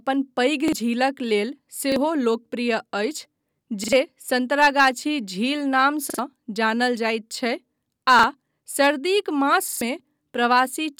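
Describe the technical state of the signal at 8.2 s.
A short stutter from 8.19 to 8.24 s, where a piece of about 43 ms sounds twice with a hard join. This is a repeated buffer: fresh audio arrived late, so the device replayed its last block, which fits a 2048-sample buffer, and roughly 40 ms of real signal was lost.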